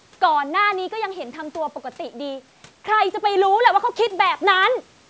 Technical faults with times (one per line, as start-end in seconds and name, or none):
none